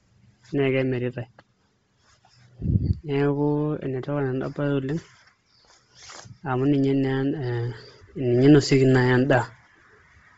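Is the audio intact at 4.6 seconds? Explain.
No. At 4.6 seconds, as throughout the clip, the speech has a breathy, grainy edge and nothing above 7.8 kHz. This is likely Bluetooth LC3 compression, heavy enough to fit about 24 kbps with 7.5 ms frames, zeroing upper bands and filling them with noise.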